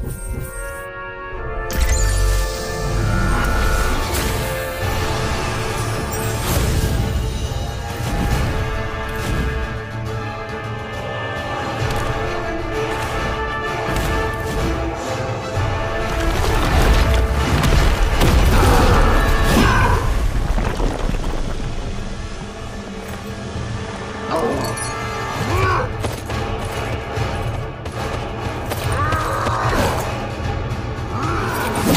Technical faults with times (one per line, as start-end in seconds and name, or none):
none